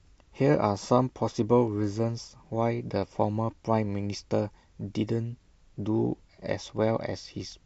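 MP2 compression damage runs through the whole speech clip, and the likely cause is MPEG Layer II coding at a rate low enough to starve it, which fits something around 80 kbps. The coder divides the spectrum into 32 equal sub-bands and shares out a bit budget; with too little to go round, upper bands drop out and the remaining ones are quantised coarsely. The result is plainly audible: a dull top end with gurgling, granular grit as bands flicker in and out.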